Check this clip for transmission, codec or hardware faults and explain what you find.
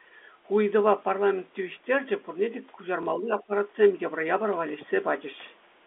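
Three faults can be heard in this speech. Sample clock jitter runs throughout. The converter's clock wanders by a fraction of a microsecond, so samples are taken slightly early or late, and the error grows wherever the waveform moves steeply. The result is a faint roughness, about 55 dB below the signal, that rises on loud, bright sounds and vanishes in pauses.

Packet loss with the last packet repeated occurs from 3.03 to 3.06 s. A 30 ms stretch went missing, which fits a single lost packet, and the receiver filled the gap by replaying the preceding audio. The moment comes out as a small blip.

From 3.18 to 3.51 s the speech is pulled down in patches, about 15 dB at the deepest and around 200 ms in total, heard as dips and partial dropouts. The likely cause is speech suppressed in double talk. The echo canceller couldn't separate the talker from the loudspeaker echo and turned both down.

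The narrow telephone band, roughly 300 Hz to 3.5 kHz, comes from G.711 coding and is not a fault.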